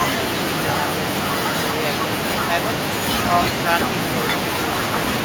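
There are no technical faults to describe in this speech recording.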